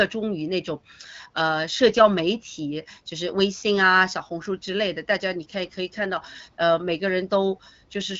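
There are no technical faults to describe in this speech, which comes through the AMR wideband (HD Voice) codec at 12.65 kbit/s with only light coding damage and nothing above about 7.3 kHz.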